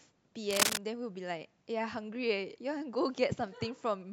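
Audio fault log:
0.51–0.79 s, cable scratch noise: A worn cable, plug or connector in the signal chain was likely disturbed here, so the contact resistance jumped about rapidly and kept breaking and remaking the connection. Each tiny fluctuation injects a spike, and together they form a dense, ragged burst of noise laid over the speech for under a third of a second. It comes through as a harsh scratching rustle, somewhat louder than the speech itself, before the signal clears again.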